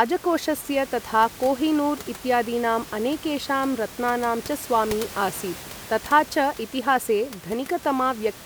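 No technical faults are audible in the speech; the only thing underneath it is the room's own background noise, sitting about 17 dB below the speech level.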